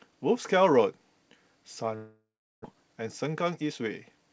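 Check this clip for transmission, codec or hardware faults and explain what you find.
Two faults stand out in this speech clip, carried over a call path whose band stops at 8 kHz, which fits G.722 at 64 kbps.

From 1.96 to 2.75 s the sound dissolves into a buzzy, smeared continuation of what came just before. It fades into about 0.34 s of silence, and speech resumes with roughly 0.6 s of material simply gone. The likely cause is a long network dropout: no packets arrived, so the receiver stretched the last sound for about 0.68 s and then gave up. On recovery it also dropped a few milliseconds and shifted its timing by several tens of milliseconds.

From 3.27 to 4.17 s the speech sounds hurried, running at about 106% speed with its pitch unchanged. This is a jitter buffer speed-up. The buffer had more audio queued than it wanted, so the receiver repeatedly cut out short pitch-period-sized pieces to shrink the delay, trimming around 50 ms in total. 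The result is a rushed delivery rather than a change in pitch.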